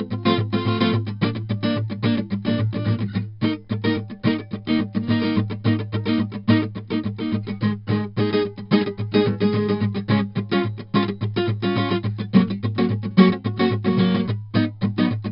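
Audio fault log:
Throughout: 4-bit ADPCM compression. Each sample is stored as a coarse 4-bit step from a prediction, so heavy gritty hiss tracks the music's level and roughens sharp attacks. Nothing sounds above 5.3 kHz, consistent with a rate near 44 kbps.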